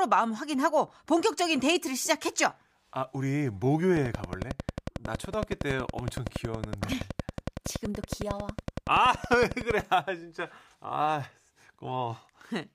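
A train of clicks runs from 3.97 s to 9.81 s: some seventy near-identical pulses at a steady 10.8 per second, peaking roughly 10 dB above the speech. They tick through the pauses too, likely from electrical interference or a faulty connection or power supply.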